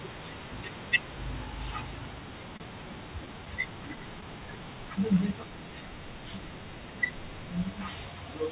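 At 2.57 to 2.63 s one sound hangs on slightly too long, with a slight buzz or dip where it should have moved on. This is a short stall from a late packet: the packet missed its slot, the jitter buffer ran dry, and the receiver stretched the last sound for 28 ms until the data arrived. Playback then resumed from the same point, so nothing is lost, but the delay grows by 28 ms.

Between 3.26 and 4.25 s there is a run of tiny hiccups, about five brief ticks or smears spread across the stretch, none longer than around 15 ms. These are scattered short gaps: packets dropped out or arrived late one at a time, and each small hole was patched by extending the preceding sound. Roughly 70 ms in total is filled this way, a small fraction of the span, and only 3 ms is added overall.

From 4.33 to 4.88 s the audio drags, running at about 94% of normal speed with the pitch unchanged, so sounds feel drawn out. 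This is a jitter buffer slow-down: to build up a reserve, the receiver repeated single pitch periods and slivers of pause again and again, adding 39 ms of material. Throughout the clip the G.711 A-law call path leaves nothing above 4 kHz, giving the familiar narrowband telephone sound.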